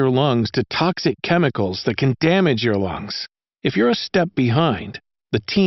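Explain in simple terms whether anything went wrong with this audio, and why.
Nothing went wrong with this audio; there are no faults to be heard in it.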